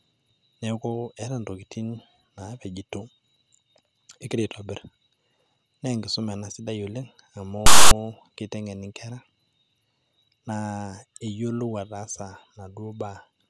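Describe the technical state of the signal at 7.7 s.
At 7.7 s the decoder is reading a block of text metadata as though it were audio samples, a case of file tags played as audio running from 7.66 to 7.91 s. The character bytes become a loud, lopsided rasp with abrupt edges cutting across the speech.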